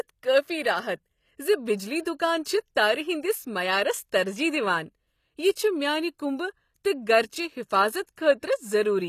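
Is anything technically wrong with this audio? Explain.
Yes. Throughout the speech the top end sounds synthetic: s sounds come out gritty and metallic, and nothing reaches above about 14.9 kHz. The likely cause is HE-AAC compression at a low bitrate, consistent with roughly 24 kbps, rebuilding the treble from copied lower bands.

Pre-echo appears at 2.75 s, from 8.06 to 8.09 s, and at 8.16 s: a short hiss arrives just before sharp attacks, smearing them softly over 12, 21 and 17 ms. The codec spreads noise meant for the loud attack across the quiet moment before it.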